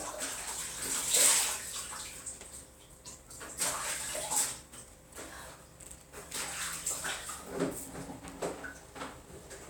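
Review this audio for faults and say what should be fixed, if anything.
Nothing needs fixing, as the audio carries through without any audible technical faults.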